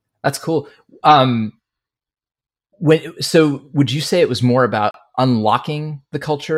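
At 4.91 s, right after "it was more about", the speech drops out to silence for about 33 ms and resumes at 4.95 s. This is a Bluetooth stall, likely caused by radio interference delaying packets on the wireless link, so the receiving buffer emptied and playback halted until retransmitted data arrived. It sounds like a brief hard gap that clips the flow of the sentence, not a fade.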